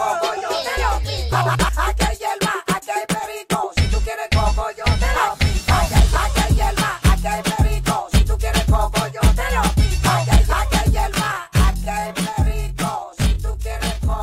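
From 11.10 s to the end at 14.23 s, software likely stretched this final stretch to about 0.66 times its original speed, a time-stretched section that repeats short slices to hold pitch steady. The pace drops abruptly while pitch stays put, leaving the audio dragging.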